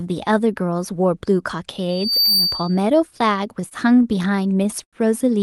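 From 1.89 to 2.88 s, loudspeaker feedback squeal rises to about 5 dB above the speech at 4.6 kHz. It swells over roughly a third of a second as the mic-speaker loop self-reinforces, unlike a steady interference tone.

From 3.61 to 4.96 s, repeated stalls (stutter) drag the speech fourteen times, with pauses up to 88 ms. Late packets emptied the buffer and held sound was continued, so nothing drops out as in packet loss.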